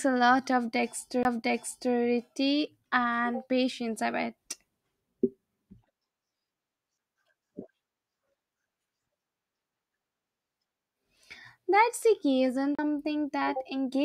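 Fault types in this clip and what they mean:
CD skip: at 1.23 s after "a lot" and 12.75 s after "the key", the laser jumps spiral turns, leaving a brief muted tick before playback resumes elsewhere.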